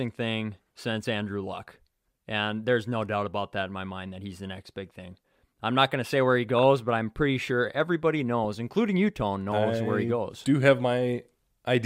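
At 1.55 s, and again from 6.59 to 6.63 s between "to say where he" and "but I'm pretty sure", DAB burbling appears. Residual bit errors slip past error correction and corrupt samples in single MP2 sub-bands. The result is short blips of noise in the speech, not the clean silent gap of a dropout.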